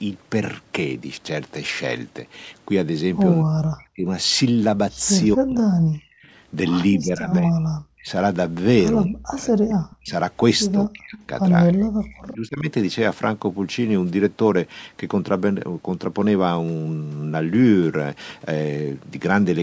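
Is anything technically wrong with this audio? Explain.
Yes. Speech suppressed in double talk occurs at 3.44–4.06, 5.34–6.17, 6.98–8.09, 9.05–10.13, 10.72–11.16 and 11.66–12.68 s. An echo canceller, likely unable to separate this talker from loudspeaker echo while both sides spoke, turned the speech down by up to about 40 dB.

An echo leak occurs at 10.06–10.11 s. An echo canceller likely left residue that was sent back, heard as a faint copy about 25 dB down, delayed by 258 ms.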